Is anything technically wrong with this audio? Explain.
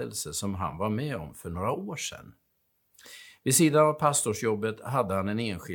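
No, nothing technically wrong can be heard in this speech recording. There is no fault to report anywhere in the clip.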